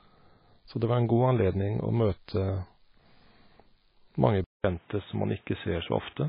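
Speech runs through the whole clip with heavy, watery, swirling damage and no content above 5.1 kHz. This is likely MP3 compression at a very low bitrate, around 17 kbps. With so few bits, the encoder drops weak frequency lines that flicker on and off from frame to frame, and it cuts the treble at a fixed point. Because this damage is present from start to finish, it is distinct from a hardware change.

At 4.44 s, the sound goes silent for about 200 ms. From there to the end at 6.29 s, it is duller and boxier, with nothing above 3.8 kHz and a new background noise about 35 dB below the signal. The overall level stays about the same. The likely cause is an input switched to a poorer device, such as another microphone or a headset's call profile. This differs from the compression in three ways: it starts at one moment, it brings a gap and its own noise floor, and it narrows the band further without adding any frame-to-frame swirl.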